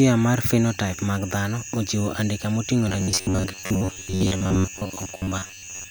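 From 2.89 s to 5.90 s the speech turns into robotic sound, a metallic 93.8 Hz buzz, likely from roughly 10.7 ms buffers being replayed for most of that stretch.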